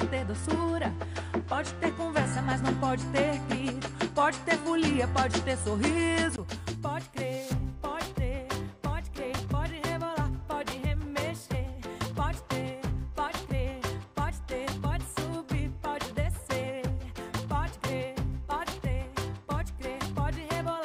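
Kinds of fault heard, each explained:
Input switched to a poorer device: for the first 6.38 s the sound is band-limited, with nothing above 10.5 kHz, and carries its own noise floor roughly 35 dB below the signal. A 20 ms gap follows, then the level shifts by around 5 dB as the wider band returns, likely because the system changed its input device. On a spectrogram the upper edge sits flat at 10.5 kHz before opening out; the waveform shows a brief blank and a step in level.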